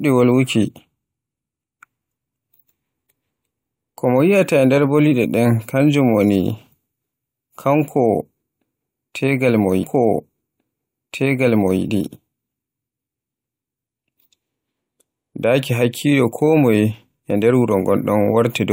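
At 9.82 s, just after "tegal mo", a stream segment repeated: the player queued the same chunk twice, so about 1.98 s of speech replays through 11.81 s. A small blip marks the jump back to the start of the duplicated segment.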